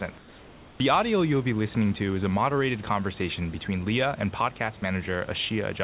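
From 0.18 to 0.8 s, the room's natural background gives way to a smooth, featureless hiss, about 2 dB quieter, for 620 ms. That's comfort noise in place of the background, likely the sender pausing transmission during silence while the receiver synthesises filler.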